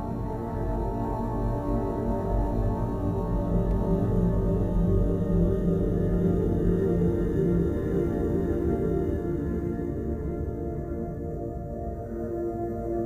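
A doubled audio track runs from 3.71 s to 9.17 s. Throughout that stretch, a second, full-band copy of the sound trails the original by about half a second, roughly 5 dB quieter, with none of the softening or room colour a real echo would carry. It switches in and out abruptly at both ends. The likely cause is the same signal being mixed in twice, either captured again through a slower path or left as two misaligned copies in an edit.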